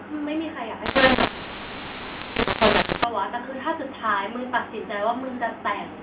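Telephone speech, band-limited to about 4 kHz, which fits G.711 coding at 8 kHz. From 0.86 s to 3.04 s, the sound turns harsh and gritty. Levels jump unevenly. Some parts blare while others shrink. Gaps fill with a hiss instead of going quiet. This is a mu-law and A-law mix-up. The stream was coded with A-law but decoded as mu-law. Each sample is mapped to the wrong step size, so its level is scrambled, and the quietest samples are pushed well above silence.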